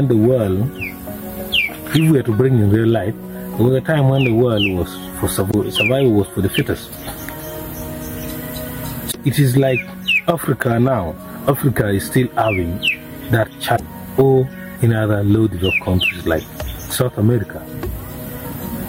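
Damaged data in a compressed stream breaks the audio three times: 5.47 to 5.54 s, 9.08 to 9.15 s and 13.73 to 13.80 s. Each lasts about 70 ms. Corrupted bytes make the decoder misread frames and lose sync. Each is heard as a brief chirp, squawk, click or short hole.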